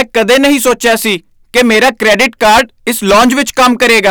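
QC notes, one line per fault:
Throughout: hard clipping. The speech is driven about 18 dB past what the stage can pass, so roughly a sixth of the samples were flattened at that stage's limit. The result is harsh fuzz on every loud syllable. The waveform shows squared-off tops, and the spectrogram shows dense harmonic smearing reaching high into the kHz range.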